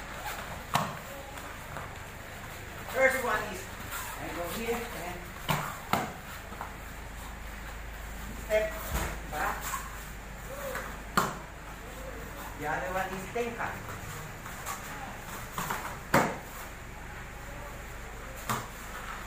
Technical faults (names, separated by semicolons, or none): none